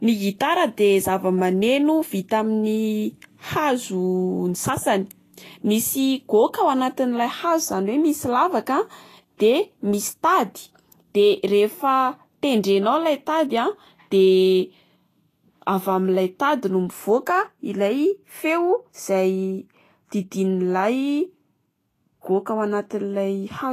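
Throughout this speech clip the treble has a hissy, grainy texture, with sibilants and other high detail replaced by coarse noise, tonal parts of the sound roughened, and attacks softened, while nothing at all is heard above 14.2 kHz. That combination points to Vorbis compression at a low quality setting, likely around 33 kbps: the encoder cuts the top band and quantises the remaining treble so coarsely that the fine detail turns into noise of similar energy.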